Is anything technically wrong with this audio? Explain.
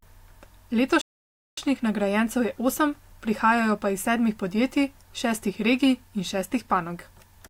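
Yes. From 1.01 to 1.58 s there is a rebuffering stall: the player exhausted its downloaded audio and halted for about 0.56 s, then resumed at "nagrajencev je osem prihajajo" with nothing lost. The waveform shows a flat gap, the spectrogram a blank vertical band.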